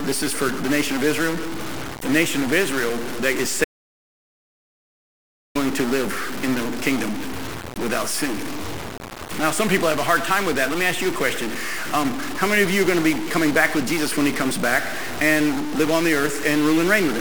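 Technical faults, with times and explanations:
Throughout: stuck bit. A distortion sits on all the speech, and pauses fill with hiss instead of falling quiet. This likely comes from one data bit held fixed, shifting about half the samples by that bit's weight. The waveform shows a jagged offset, and the spectrogram shows broadband haze filling the gaps.
3.64 to 5.55 s: audio dropout to silence. Speech cuts out mid-flow and resumes after about 1.9 s of total silence, with no room tone left. The input was likely lost while the recorder kept writing zeros. The waveform is a flat line, and the spectrogram shows an empty vertical band.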